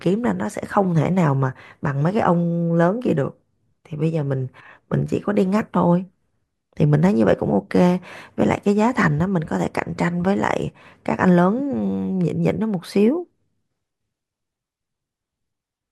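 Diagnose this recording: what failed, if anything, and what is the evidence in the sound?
Nothing failed, and the sound gives no evidence of a fault at any stage of this speech recording.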